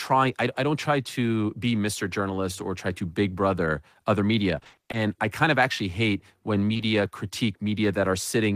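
From 4.59 to 4.95 s, right after "big brother other media" and before "I kind of actually", there's repeated packet loss with a robotic sound. Short holes of up to 20 ms keep arriving, and the receiver patches each by stretching the last bit of speech. About half that stretch is filled-in audio, so it goes choppy.

Then, just after "of actually hate when", there's short concealed packet loss twice in a row, at 6.73 to 6.77 s and 6.77 to 6.81 s. Each time roughly 20 ms never got through and was covered by extending the preceding sound, leaving a quick smear or wobble before the real audio blends back in.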